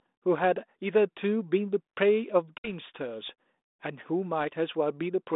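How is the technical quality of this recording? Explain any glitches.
One glitch stands out on this 32 kbit/s G.726 ADPCM phone line. From 2.58 to 2.71 s, packet loss on the ADPCM call drops about three packets, a 60 ms silent gap. Afterwards the decoder's predictor and step size lag the sender's, so the speech returns with brief distortion.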